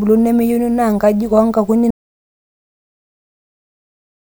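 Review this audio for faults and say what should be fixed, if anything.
Audio dropout to silence from 1.91 s to the end: the speech cuts off into silence, with no room tone. It shows as a flat waveform line and a blank spectrogram. The likely cause is lost input while recording continued. Secure cables and connections, check mute controls, and monitor input levels live during capture.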